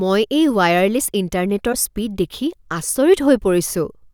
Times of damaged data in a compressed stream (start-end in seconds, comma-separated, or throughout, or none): 1.69-1.75